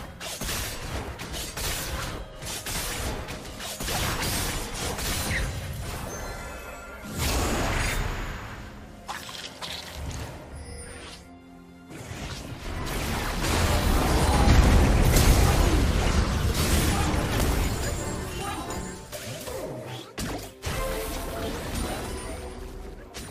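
No technical faults can be heard anywhere in the recording.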